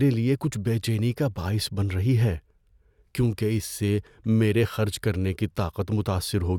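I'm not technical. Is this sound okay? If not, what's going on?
Yes, nothing technically wrong can be heard anywhere in this recording.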